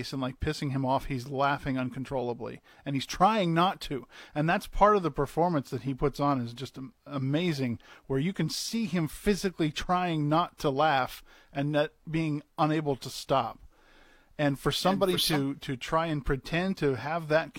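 A speech clip with a compressed frames skipped fault near its end. At 16.68 s the audio jumps forward. Roughly 50 ms of sound goes missing, ending by 16.73 s. The gap fits a single lost frame, consistent with a frame length of about 46 ms. The frame was either missing from the file or rejected by the decoder as damaged.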